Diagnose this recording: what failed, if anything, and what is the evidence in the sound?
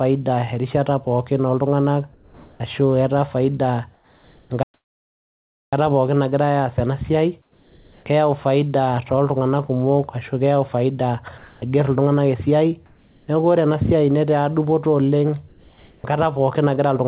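Comfort noise in place of the background at 2.14–2.6, 3.94–4.5, 7.42–8.06, 12.86–13.28 and 15.48–16.04 s. This is call processing. The pauses turn into steady, featureless hiss about 2–5 dB quieter, likely from discontinuous transmission.

Playback stall from 4.63 to 5.73 s, in the driver or buffer stage. Output goes silent for about 1.1 s mid-flow, likely because the player ran short of data.

Sound dropped by the voice detector at 11.38–11.62 s, in call processing. About 140 ms of speech gives way to steady noise, likely because the detector mistook quiet speech for background.

Onset clipped by the voice detector at 16.02 s, in call processing. The speech begins abruptly, missing about 20 ms of its soft start, likely from the detector triggering late.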